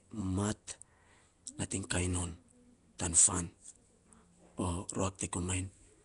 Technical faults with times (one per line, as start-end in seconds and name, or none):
0.00-6.04 Nellymoser compression